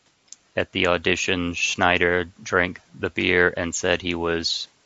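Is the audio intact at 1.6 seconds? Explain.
Yes, at 1.6 seconds the speech is intact and runs cleanly through the call microphone processing, with no dropout, distortion or other fault at that point.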